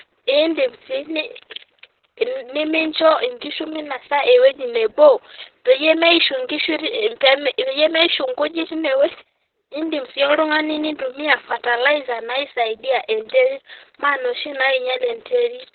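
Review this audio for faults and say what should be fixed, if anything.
Opus voice compression runs through the whole clip. Nothing above about 4.3 kHz survives, so the speech sounds boxy and muffled, and the coarse SILK excitation makes it hoarse and a bit robotic. That much damage points to narrowband Opus at roughly 6 kbps. To avoid it, encode at 24 kbps or more so Opus keeps wideband or fullband audio.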